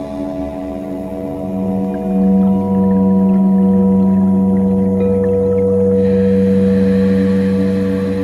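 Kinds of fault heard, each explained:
Overlap-add ripple, 0.0 to 1.85 s: the audio was split into windowed frames and rebuilt with an overlap whose window gains do not add up to a steady level, so the loudness swells and dips once per frame. Here the level pulses by about 6 dB at a rate of around 100 Hz, giving the sound a metallic buzz with extra tones around each note, laid over the opening stretch.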